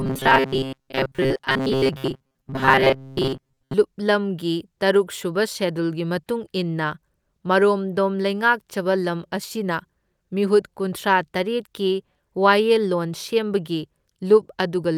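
From 0.01 s to 3.74 s the speech shows robotic sound from repeated short buffers: a rigid, metallic buzz at 133 Hz that only loosely follows the speech. This likely comes from late-arriving audio being replaced, for most of that span, by a looped segment near 7.5 ms.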